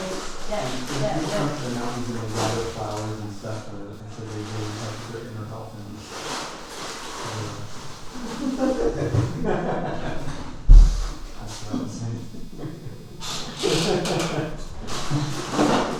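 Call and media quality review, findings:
Computer activity noise, whole clip: faint buzzy chirping, pulses around 300 Hz, roughly 35 dB under the signal. Rises and falls with machine load, not with the audio. Probably CPU/GPU or mouse current on a shared ground bleeding into the analogue input path.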